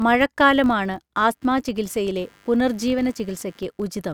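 A filter restarted on every block, dropping its state each time, so a small transient opens every block, giving a steady 46.9 Hz buzz throughout that fits a 1024-sample block. From 1.21 s to the end, computer activity noise appears as processor or peripheral load disturbs the shared audio ground, adding a pulsing near 100 Hz roughly 35 dB below the speech.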